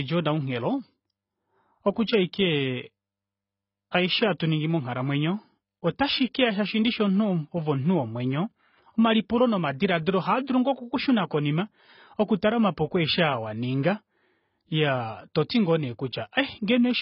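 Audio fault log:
throughout AAC compression: the speech sounds dull, with nothing above 5.5 kHz and heavy codec damage, likely from AAC-LC coding at a rate that fits about 16 kbps. Unlike a simple low-pass filter, the band that remains is itself coarsely quantised, not just cut off.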